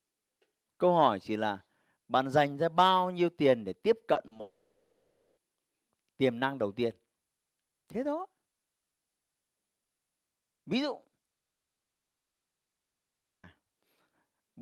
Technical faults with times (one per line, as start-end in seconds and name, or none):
4.13-4.41 repeated packet loss (robotic sound)
4.41-5.39 long network dropout
11.37-13.45 long network dropout